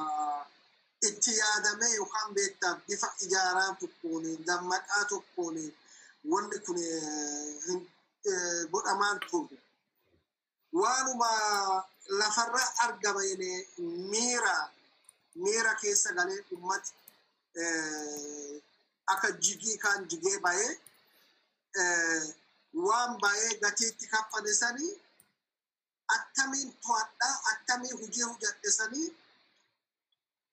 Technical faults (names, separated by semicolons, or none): sample clock jitter